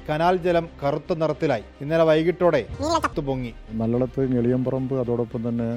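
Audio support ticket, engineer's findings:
Audio read two samples at a time (double speed), 2.74 to 3.13 s. Sound jumps an octave and plays at 2x. Likely cause in the decode or format-handling stage: each pair of samples is taken as one frame, either as two channels or as one double-width sample.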